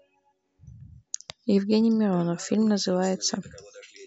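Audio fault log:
No faults turn up anywhere in this bit of speech, so there's nothing to log here.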